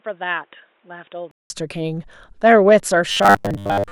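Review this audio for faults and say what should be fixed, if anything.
From 0.0 to 1.5 s the speech is dull and boxy, with a narrower band, noticeably quieter, and carrying a faint background noise of its own. It then opens up again after a 188 ms silence. This is likely an input switched to a poorer device, such as a headset's call profile. On a spectrogram, energy is cut off flat at a lower frequency until the gap, then extends higher. The waveform shows a lower amplitude before a clean dropout. Locking the input device before recording starts prevents this.

From 3.10 s to the end at 3.91 s, the speech turns into a rigid metallic buzz at 100 Hz. This is robotic sound from repeated short buffers, which fits a 10 ms buffer being replayed while most of the real audio is skipped, likely because new audio arrived too late. A spectrogram shows evenly spaced harmonic lines at multiples of 100 Hz. 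The waveform repeats 10 ms cycles over and over. Giving the audio thread a larger buffer or higher scheduling priority prevents this.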